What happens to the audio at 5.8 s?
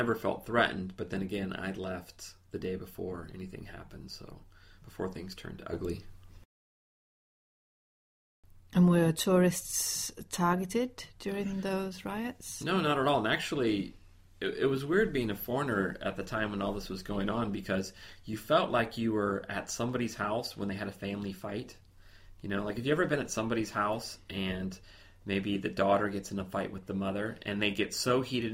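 At 5.73 s the level steps up by about 6 dB in a single instant, and the sound and its background noise rise together rather than the source itself getting louder. The raised level holds until 8.03 s. This is a sudden gain jump: the likely cause is a digital gain change applied from one sample to the next without any ramp, as when a setting or bit shift takes effect abruptly.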